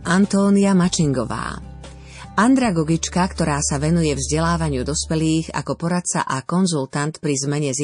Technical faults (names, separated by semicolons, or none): MP3 compression; pre-echo